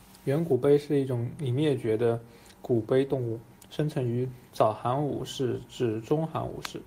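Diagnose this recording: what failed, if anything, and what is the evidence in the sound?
Nothing failed; no fault is audible anywhere.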